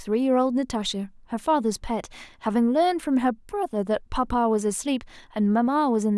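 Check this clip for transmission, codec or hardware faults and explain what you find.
Listening through the recording, nothing stood out that would point to a problem in how it was transmitted, encoded or captured.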